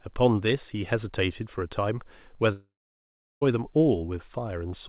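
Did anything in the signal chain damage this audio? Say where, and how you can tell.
Yes. A long network dropout runs from 2.52 to 3.43 s. The speech breaks into a fading buzz, then about 0.74 s of near silence, and resumes without the lost stretch. The stage is likely the network. Packets stopped arriving, so the receiver's concealment stretched the last sound briefly before giving up. Roughly 0.9 s of speech never played. The narrowband sound, with nothing above 4 kHz, fits a G.711 call path.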